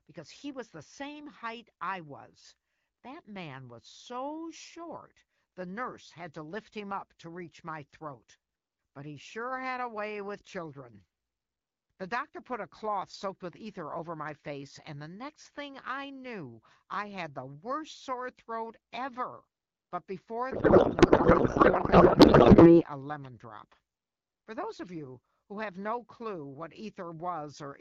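A speech recording carried over AMR wideband, whose light coding softness fits a rate around 12.65 kbit/s, has two faults. From 20.51 to 22.84 s, a codec payload misread occurs: the sender packs AMR frames octet-aligned, but the receiver unpacks them as bandwidth-efficient, so the decoder pulls its parameters from the wrong bit positions. The speech gives way to garbled noise and warble that barely tracks it. At 23.25 s, an electrical switching spike, likely from a nearby switch or static discharge arcing into the line, lands as a sharp snap on top of the audio.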